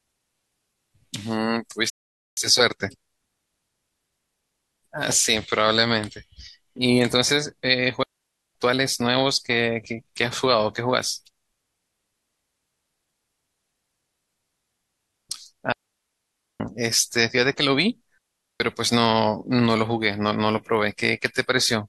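A short stretch of speech that halts at 1.90 s, sits silent for about 0.47 s until 2.37 s, then picks up at exactly the point it left off, with nothing skipped. That pause is a rebuffering stall: the player exhausted its downloaded audio and simply waited for more data, so the recording is intact but stretched by that half-second of dead air. Three later gaps sound different, clean holes of near silence opening and closing with only a very brief fade and no crackle or hiss around them, from 8.03 to 8.55 s (about 0.52 s), 15.72 to 16.60 s (about 0.88 s) and 18.18 to 18.60 s (about 0.42 s). These are digital wireless dropouts, where the radio link lost too much data and the receiver muted rather than pass corrupted audio, so the speech in those spans is missing, not delayed.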